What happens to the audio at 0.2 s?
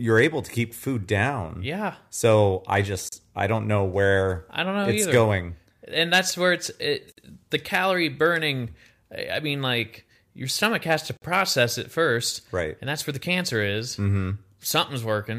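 Hard clipping: from 0.17 to 0.25 s the speech peaks overdrive a stage by about 3 dB, so their tops are sliced flat. That squaring adds high harmonics, heard as a brief crackly edge on the loudest moments just before "to keep food down".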